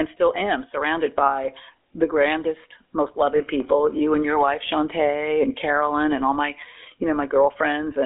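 Buzzy, gravelly roughness runs through the whole speech recording, with the sound squeezed into a telephone band of roughly 300 Hz to 3.5 kHz. That is the GSM full-rate codec: it models the voice as a filter excited by sparse regular pulses, and the plainly audible damage fits its 13 kbps rate. From 3.36 to 3.41 s, a brief rough, metallic ring holds the sound for about 40 ms. These are lost GSM frames, likely two in a row, concealed by repeating the last good frame's settings.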